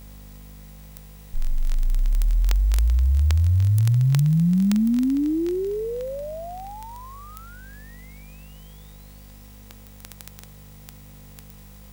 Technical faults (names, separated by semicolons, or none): word clock ticks